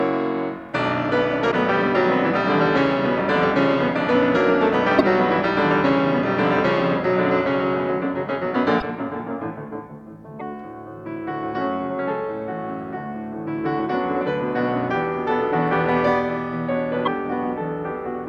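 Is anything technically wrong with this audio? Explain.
Yes. There are five brief glitches, at 1.50–1.53 s, 4.98–5.01 s, 8.79–8.82 s, 10.39–10.42 s and 17.05–17.08 s. Each lasts about one 26.1 ms MP3 frame, and the sound skips ahead at each one. The likely cause is a broken MP3 bit reservoir: after frames were lost, the next frame reached back for borrowed data and decoded bytes from the wrong frame.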